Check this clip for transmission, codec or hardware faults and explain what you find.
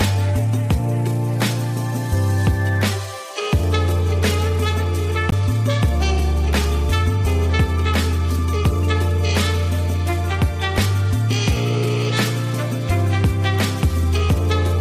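One fault is audible, a single short burst of damaged data in a compressed stream at 5.29 to 5.33 s. Corrupted bytes there make the decoder misread those frames and lose sync until it finds the next valid frame header, producing a brief glitch about 40 ms long.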